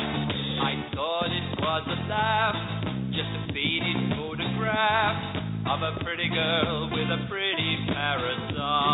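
No technical faults can be heard anywhere in the clip. Nothing in the audio breaks, drops out or changes from one moment to the next.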